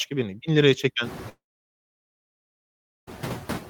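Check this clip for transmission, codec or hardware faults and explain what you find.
Two faults are present: a long gap in the received audio and light noise suppressor artifacts.

From 1.29 s to 3.09 s the stream most likely suffered a long network dropout. Audio stopped arriving, and the receiver briefly extended the last sound as a fading buzz or hiss before falling to about 1.7 s of near silence. Speech resumes after 3.09 s with that stretch missing.

Throughout the clip, a noise suppressor is estimating steady background noise band by band and pulling it down, but only by about 1 dB. The room noise, which rises by about 24 dB around 1 s, therefore stays close to its full level.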